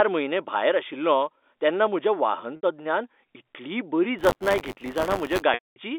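Packet loss with pitch repetition at 2.56 to 2.63 s: about 70 ms of this telephone-band speech never arrived, and the receiver bridged the gap by looping the last pitch period. Because the loss runs longer than the roughly 50 ms fade, the sound turns briefly held and buzzy, then thins toward silence before the speech resumes. The gap length fits 10 ms packets.

Buffer tearing from 4.18 to 5.43 s: the writing program and the reading hardware have slipped around the ring buffer, so each 10 ms period carries a small slice of audio from one lap earlier, about 20 ms old, spliced in with hard joins on both sides. The result is a steady robotic rattle at 100 Hz that rides on the speech and drops away in pauses.

Packet loss with pitch repetition again at 5.54 to 5.76 s: this time 220 ms is missing. The repeated pitch period buzzes for an instant, fades out within about 50 ms, and leaves silence until the speech returns through a short cross-fade. 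The G.711 A-law line band of 250 Hz to 3.6 kHz can be heard throughout.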